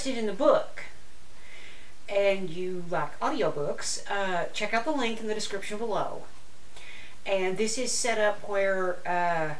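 No technical faults can be heard anywhere in the audio.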